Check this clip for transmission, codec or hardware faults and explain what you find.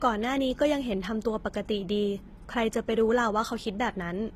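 There's one fault, and it runs through the whole speech clip: transcoding between lossy codecs. Everything above 15.7 kHz is gone, and two different sets of codec artefacts sit on top of each other. That points to a low-bitrate HE-AAC encode that was likely re-encoded to Opus, with the second codec spending bits on the first one's damage and adding its own.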